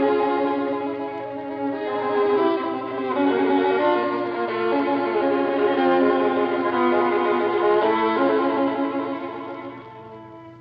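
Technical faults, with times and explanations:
No technical faults can be heard anywhere in this audio.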